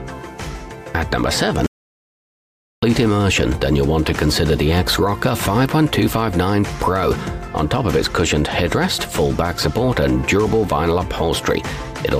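An audio dropout to silence runs from 1.66 to 2.83 s: the sound cuts off abruptly and about 1.16 s of silence follows, with no room tone, before it resumes mid-flow. The likely cause is a lost input while recording continued writing silence.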